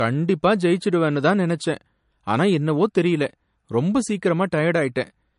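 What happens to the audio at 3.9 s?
At 3.9 s, as through the whole clip, the speech sounds dull and has nothing above 10.6 kHz. This is low-bitrate audio saved at a high bitrate, likely an MP3 of around 44 kbit/s re-encoded much higher. Unlike a simple low-pass filter, the first encoding's smeared, swirly artefacts remain, and the file's generous bitrate does not remove them.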